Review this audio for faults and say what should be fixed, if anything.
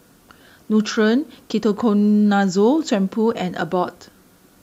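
Low bit depth with dither, throughout: dithered rounding to very few levels, consistent with 9-bit samples, leaves a steady, even hiss roughly 40 dB below the speech. Keep the audio at 16 bits or more through recording and processing, and reduce and dither only once at the final export.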